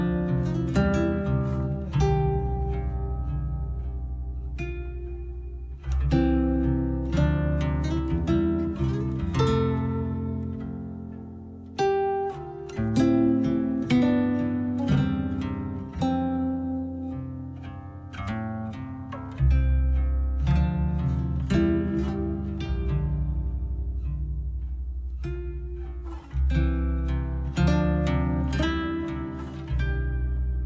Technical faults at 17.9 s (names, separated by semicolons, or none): wrong sample rate